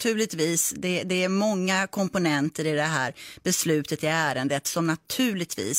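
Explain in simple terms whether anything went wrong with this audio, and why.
Nothing went wrong with this audio, so there is no problem to explain.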